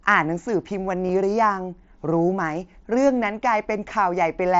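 It's a speech clip with concealed Bluetooth headset packet loss at 1.07 to 1.09 s: roughly 22 ms patched with repeated waveform, which fits about three lost packets, heard as a brief buzzy glitch over the light mSBC graininess.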